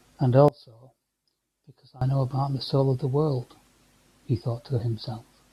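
From 0.48 s to 2.01 s the speech drops sharply, by about 23 dB, when heard in mono. This is one channel inverted. The likely cause is one stereo channel carrying reversed polarity. When the two channels are summed, the centred voice cancels against itself. Only the small difference between left and right survives. The speech turns faint. After 2.01 s it returns to full strength.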